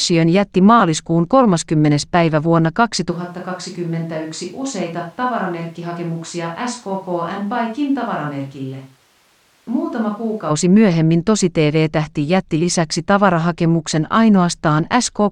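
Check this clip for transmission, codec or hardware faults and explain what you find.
One fault is present. From 3.13 to 10.49 s there is a switch to a distant microphone, likely because the close microphone's signal dropped out. The speech turns suddenly hollow and roomy, about 10 dB quieter and thinner in the bass, with background noise roughly 35 dB below it. The waveform shrinks abruptly, and the spectrogram loses low-frequency energy while its noise floor rises, until both snap back at 10.49 s.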